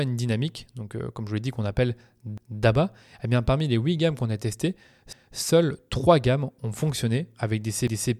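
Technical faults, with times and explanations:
2.38–2.63 s, 5.13–5.38 s and 7.88–8.13 s: overlapping chunks. The speech was handled in 2.5 s blocks, and each block starts about 250 ms before the previous one finished, so that quarter-second gets played twice at every join. You hear a stutter right after "l'ai dit qu'on appelle" before "eh bien parmi les", again after "gammes qu'on a testées", and once more after "gammes ont fonctionné avec", all evenly spaced.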